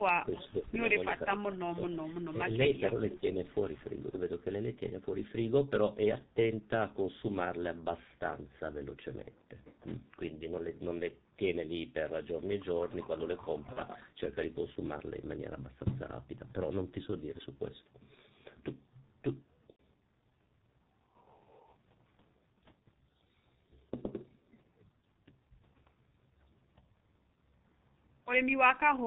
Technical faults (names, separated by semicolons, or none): G.723.1 codec; speech suppressed in double talk; echo leak; VoIP packet loss concealed by the speech codec